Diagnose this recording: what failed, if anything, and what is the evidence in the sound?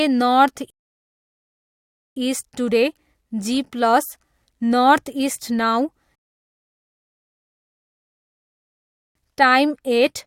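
Rebuffering stalls at 0.70 to 2.17 s and 6.15 to 9.15 s point to the playback stage starved by network delivery. The speech drops to silence and then resumes at the exact point it left off, resuming on "इस्ट टुडे" after the first gap. No material is skipped, but about 1.46 s and then 3.0 s of dead air are inserted. The player's buffer emptied and it simply waited for more downloaded audio.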